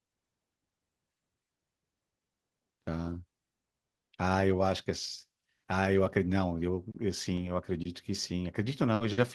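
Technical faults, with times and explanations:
6.91 to 6.97 s, short stall from a late packet: a sound is held about 30 ms too long, with a faint buzzy smear, and then continues with nothing skipped. A packet arrived late, the jitter buffer emptied, and the receiver stretched the last sound to fill the wait. Playback then resumed from the same point, running 30 ms behind.
8.95 to 9.04 s, burst of packet loss: the sound freezes into a held, fading sound for about 60 ms, then jumps ahead with roughly 60 ms of audio gone. A run of packets was lost or came too late to play. The receiver repeated the last sound while turning it down, then skipped straight to the next packet that arrived in time.
9.13 to 9.21 s, short stall from a late packet: a second, longer hold of about 50 ms, again a stretched and slightly buzzy sound with no audio missing afterward. Another packet came late and drained the buffer, so the receiver extended what it had until the packet arrived. 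The audio then picked up where it stopped, now 50 ms later than before.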